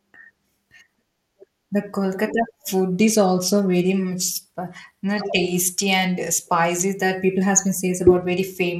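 From 2.92 to 6.89 s, and again from 8.03 s to the end, the speech shows a Bluetooth SBC bit pool drop. The treble goes dull and gritty noise appears. This fits the bit pool falling from 31 to 14, roughly 99 kbps.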